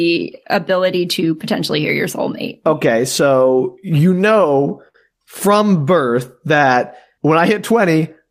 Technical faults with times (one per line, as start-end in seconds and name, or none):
3.97-4.96 repeated stalls (stutter)